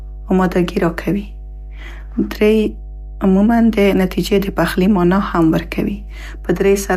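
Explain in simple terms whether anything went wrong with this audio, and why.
Something went wrong: mains hum runs through the whole recording. Electricity from the power supply leaked into the audio signal, most often through a ground loop between connected equipment or a transformer sitting close by. That adds a steady, low buzzing tone at 50 Hz, the frequency of the mains power, along with a few low overtones. Here the hum is fairly loud, sitting clearly underneath the speech from start to finish rather than coming and going.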